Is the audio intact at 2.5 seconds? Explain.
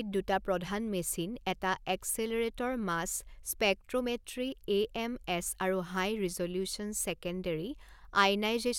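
Yes, the audio is intact at 2.5 seconds, with no dropout, click or other technical fault at that moment.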